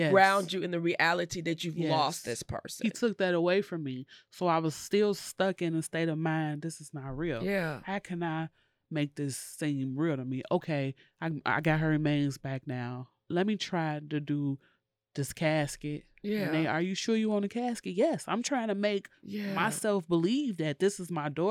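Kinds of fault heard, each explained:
No kinds of fault are heard in this clip.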